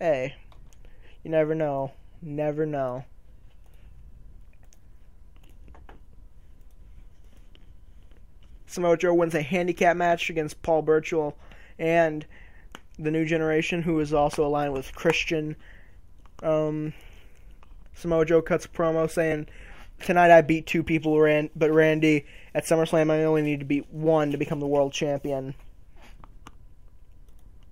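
No technical faults can be heard anywhere in the audio, and the signal stays steady and intact for its whole duration.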